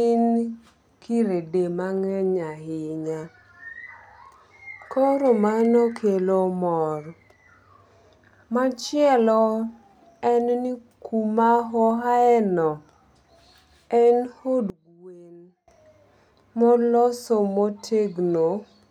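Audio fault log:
14.7–15.68 s, one channel inverted: the speech sinks by about 24 dB, leaving a weak residue. The likely cause is one stereo channel flipped in polarity, cancelling the centred voice in mono.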